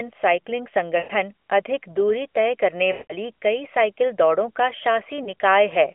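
Lost AMR speech frames hit three times, on this narrowband phone line: 0.98 to 1.12 s smears into a fade, 2.92 to 3.13 s after "तय करने" drags longer, fitting nine dropped frames, and 5.24 to 5.29 s after "कई साइकिल दौड़ों का" is just a quick dip.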